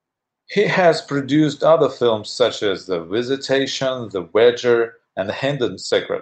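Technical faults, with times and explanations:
No technical faults are heard in this clip.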